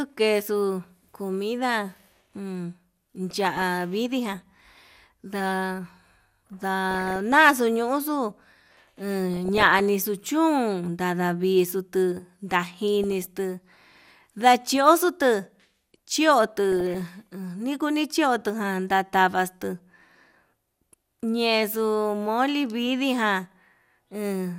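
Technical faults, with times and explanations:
3.30–3.67 s, 6.91–7.36 s, 9.34–9.80 s, 13.04–13.26 s, 16.72–17.07 s (just before "nikuni chiotu") and 23.40–23.98 s (just after "moli vidii ján"): DAB burbling. Each burst lasts a fraction of a second, with burbling noise over the speech. Weak reception lets bit errors, under one percent, slip past error correction into the MP2 data. Corrupted samples put short blips of noise in individual sub-bands, and corrupted scale factors make sub-bands jump in level for up to a frame. On a spectrogram this shows as scattered, blocky horizontal tiles flickering on and off. The waveform shows ragged, uneven envelope spikes.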